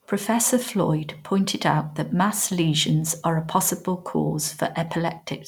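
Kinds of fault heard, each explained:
No technical fault can be heard anywhere in the speech recording, and the signal stays continuous and stable throughout.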